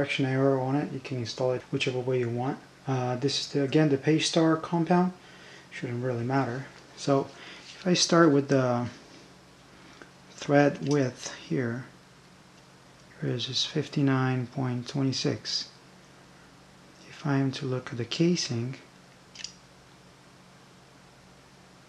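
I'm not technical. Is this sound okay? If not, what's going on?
Yes, the sound is technically fine, with nothing wrong to be heard anywhere in the recording.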